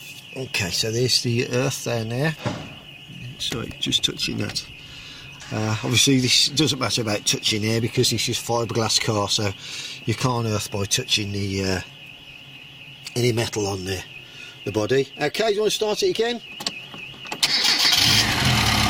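No dropouts, distortion, noise bursts, timing slips or other transmission or device faults are audible anywhere in the clip.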